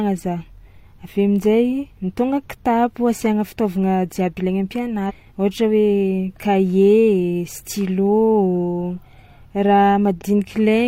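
Damaged data in a compressed stream appears at 5.06–5.11 s and again at 10.18–10.22 s. Corrupted bytes make the decoder misread those frames and lose sync until it finds a valid frame header, leaving a brief glitch in the speech each time.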